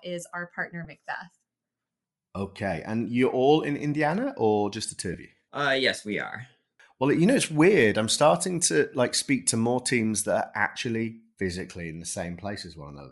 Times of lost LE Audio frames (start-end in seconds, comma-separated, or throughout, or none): 0.84-0.87, 5.13